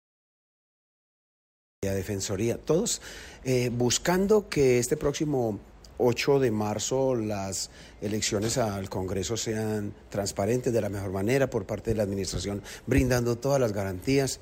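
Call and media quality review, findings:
Cut-off start: digital silence 0.00–1.83 s, then sound begins abruptly mid-event at 1.83 s with no attack or fade-in. Capture or stream opened late. Waveform shows flat near-silent line, then abrupt content; spectrogram shows a sharp vertical onset edge.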